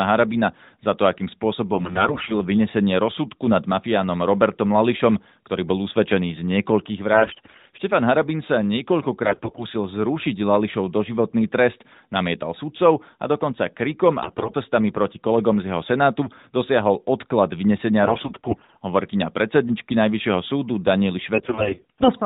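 Speech turns hoarse, scratchy and gargly in six short bursts, at 1.7–2.3 s (after "za to akým"), 7.1–7.8 s, 9.2–9.7 s, 14.2–14.5 s (after "sudcov a dokonca krikom"), 18.0–18.8 s (before "hovorkyňa predsedničky") and 21.3–22.1 s, while pitch and level hold. These are AMR bit errors: on a poor link, flipped low-priority bits misplaced the codec's excitation pulses and skewed its fine gain and spectral values, all within narrowband AMR-NB at 12.2 kbps.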